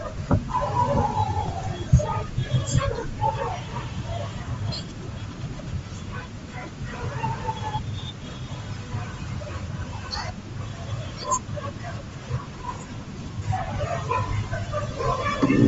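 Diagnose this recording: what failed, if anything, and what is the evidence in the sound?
The codec stage is at fault, throughout the speech. The top of the spectrum sounds breathy and grainy, and the damage is plainly audible. The likely cause is Bluetooth LC3 compression, which fits about 32 kbps in 10 ms frames. Upper bands are zeroed and refilled with noise.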